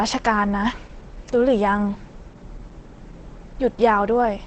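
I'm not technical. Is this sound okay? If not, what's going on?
No. Throughout, the speech sounds muffled and hoarse, with nothing above about 8.9 kHz. This is likely heavy Opus compression, squeezed so hard that it switched into its speech mode. That mode trims the high, crisp sounds and roughens the rest.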